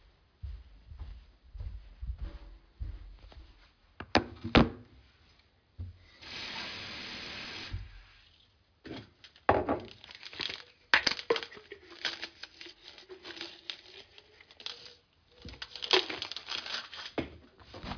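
A recording of sounds with aliasing throughout. Content above 5.5 kHz folds back below that point as unrelated, gritty tones about 10 dB under the wanted sound, which fits a sample-rate reduction from 44.1 kHz to 11 kHz made without an anti-aliasing filter.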